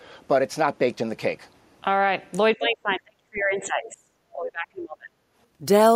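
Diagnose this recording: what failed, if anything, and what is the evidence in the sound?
Speech suppressed in double talk, from 2.56 to 4.17 s and again from 4.33 to 5.11 s. In the first stretch the voice drops away in pieces for about a second and a half in total, sinking by around 35 dB at its deepest. The second stretch loses about 0.7 s, falling by roughly 30 dB. The stage is call processing: the echo canceller was likely unable to separate the near talker from loudspeaker echo while both sides spoke, so it attenuated everything.

Other side's voice leaking through, at 3.85 to 3.89 s: a brief scrap of a second voice, around 20 dB below the speech level, surfaces inside the first suppressed stretch. This also points to call processing. The far end was playing on the device's loudspeaker, and the echo canceller likely left a residue of it in the microphone signal.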